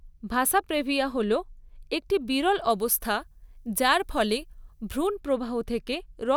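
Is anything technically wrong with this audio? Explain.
Yes. From 2.70 to 5.07 s, just after "একটি বিরল", the speech has pre-emphasis left on: the treble boost, consistent with the CD 50/15 µs curve, was never undone. At 10 kHz it sits about 8 dB above 1 kHz, which makes the speech thin, bright and sibilant.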